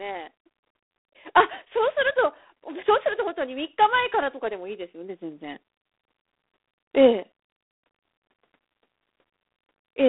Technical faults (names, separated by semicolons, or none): G.726 ADPCM